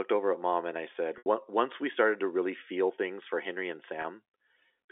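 At 1.18 to 1.26 s, between "mom and i said" and "we started to really", the sound holds on a buzzy, repeated tone that fades toward silence. At 4.02 to 4.04 s, just after "things for henry and", a briefer buzz appears. This is packet loss with pitch repetition: the receiver looped the last pitch period to cover about 80 ms, then 20 ms, of missing audio on the G.711 telephone line.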